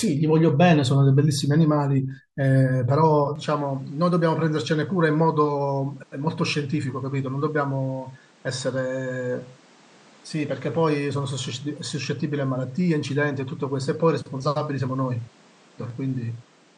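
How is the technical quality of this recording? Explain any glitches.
Quality drops at 3.36 s, where the input was likely switched to a poorer device until the end. Its band stops near 9.5 kHz, so the speech turns duller and about 5 dB quieter over new noise roughly 30 dB down, with no gap at the switch.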